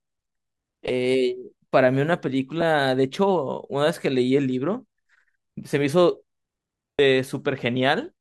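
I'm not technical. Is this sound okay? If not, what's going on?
No. The speech has lost LE Audio frames: brief gaps where the wireless link dropped audio and the decoder patched them with a hissy copy of the previous sound. Two short blips fall at 0.88 s and 2.61 s, each suggesting one lost frame. A longer smear runs from 6.95 to 6.99 s and fades as the patching runs out.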